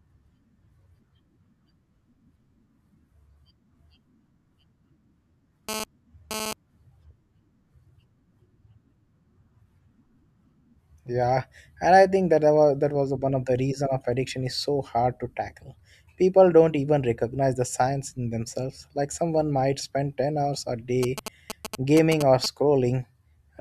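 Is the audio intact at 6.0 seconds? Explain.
No. A GSM phone buzz covers 5.69 to 6.53 s. A nearby 2G phone bursts about 217 times a second, and the audio circuit rectifies those pulses. The result is a hard, raspy buzz about 8 dB below the speech, briefly present as during data transfer.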